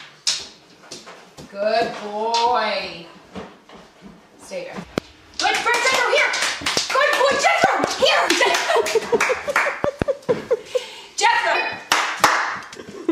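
The audio jumps ahead three times, which is compressed frames being skipped: whole blocks of the encoded stream never reach the output, either missing or rejected as corrupt by the decoder. At 4.82 to 4.84 s roughly 200 ms vanishes, and at 11.54 s and 12.74 s roughly 300 ms goes each time. With 26.1 ms frames, those gaps fit something like ten to fifteen dropped frames. The overlap between neighbouring frames turns each join into a short smeared blip, not a hard click. On top of that there are loud pops sitting about 20 dB above the signal: single ones at 4.98 to 5.00 s and 6.77 to 6.79 s, and double pops spread over 7.64 to 7.86 s and 9.84 to 10.04 s. The sound carries on underneath each one. A sharp voltage spike of this kind, likely from a plug, switch, static discharge or a driver glitch, gets shaped by the downstream circuitry into that punchy thump.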